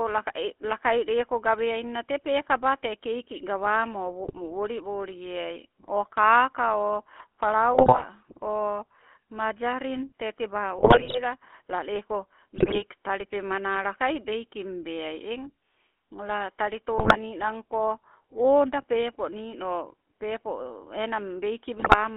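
The GSM full-rate codec shapes the whole clip. The speech sits in a 250 Hz to 3.4 kHz band. Its coarse pulse excitation gives a plainly buzzy, gravelly roughness.

GSM bit errors break in at 4.24–4.39 s, 7.74–8.05 s just before "o majarin tee tebaa", 10.78–11.21 s right after it, 12.56–12.84 s, 16.98–17.17 s before "ninanko oda pepo nino", and 21.77–21.95 s. Corrupted decoder values warp those frames. Each burst sounds like squawks, pops and gargling.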